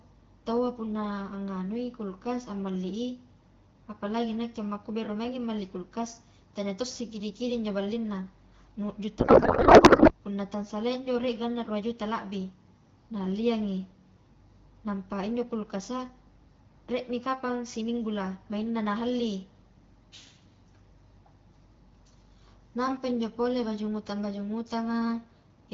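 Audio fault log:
9.19 to 10.12 s, codec payload misread: for just under a second the speech is replaced by garbled noise and warble that barely tracks it. The receiving end is unpacking AMR-WB frames in the wrong format, reading octet-aligned packing as bandwidth-efficient, so every decoded field lands misplaced.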